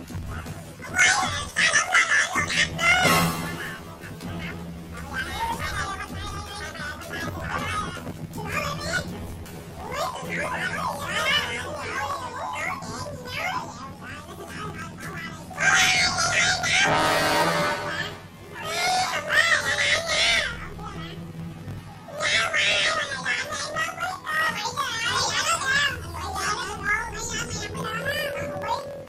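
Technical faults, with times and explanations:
Throughout, planar audio read as interleaved: each 24 ms block of all-left then all-right samples plays twice at double speed, so the sound is an octave high with a robotic buzz near 42 Hz. Unlike a simple speed-up, overall pace and length stay correct.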